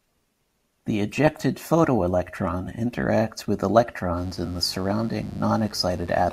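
From 4.14 s to the end of the speech, a steady, raspy mains buzz sits under the voice, roughly 25 dB below it. Sharp switching spikes, twice per 50 Hz cycle, leak in through a dimmer, rectifier or poor shielding, spraying harmonics up into the kilohertz range.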